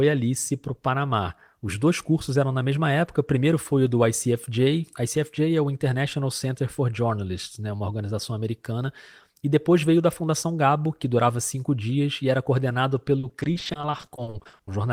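From 13.19 to 14.69 s the speech breaks into repeated packet loss, giving a robotic, choppy sound: 23 short gaps up to 40 ms each get patched by stretching the last sound, concealing about a third of that stretch.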